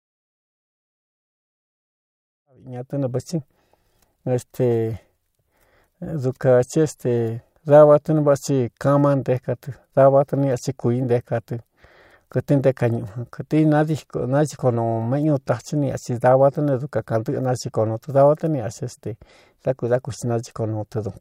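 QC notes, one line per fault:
No faults to log for QC; the speech fades in smoothly, reaching full level at about 3.14 s.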